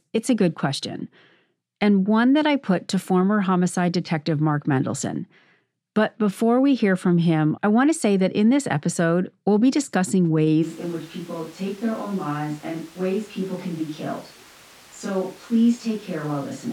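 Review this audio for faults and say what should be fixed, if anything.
At 10.6 s, after "episode we'll be discussing", the speech turns roomy and hollow through to the end, quieter by roughly 5 dB with more background noise: likely a switch to a distant microphone. Monitor the close microphone continuously during recording.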